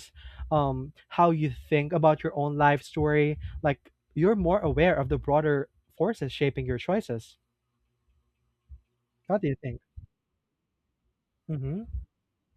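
No technical faults can be heard anywhere in the recording, and the signal holds steady throughout.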